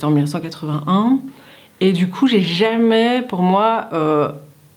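No technical faults can be heard anywhere in the clip.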